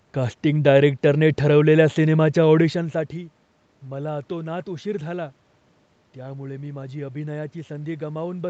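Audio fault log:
No faults are heard in this speech clip. The audio stops at 8 kHz, as expected from a call path with Opus coding, and the talker's level shifts at about two and a half seconds as they change distance from the microphone.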